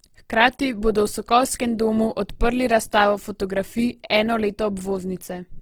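Throughout, the speech sounds grainy and rough. The likely cause is Opus compression, whose music mode fills starved bands with noise. That fits a low bitrate near 16 kbps.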